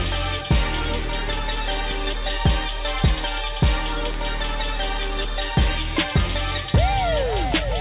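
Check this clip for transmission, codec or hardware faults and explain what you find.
Nothing here points to a transmission, codec or hardware fault; the audio has the narrow, phone-like sound of a call path with nothing above 4 kHz, which fits G.711 A-law at 64 kbps, and that is simply how such a line sounds.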